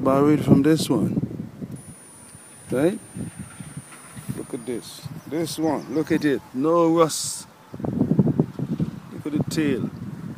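A switching supply whistle sits in the audio from 1.76 to 4.84 s. It is a thin high tone near 10 kHz, wandering between 9.24 and 9.74 kHz, roughly 25 dB below the signal. A switching power supply is running in an audible burst mode or beating with another one.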